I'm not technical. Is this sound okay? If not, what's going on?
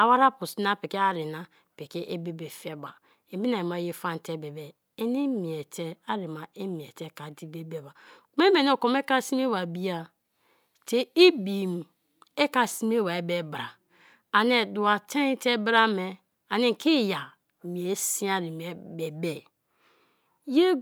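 Yes, this sound is okay, and there's nothing going on that needs fixing.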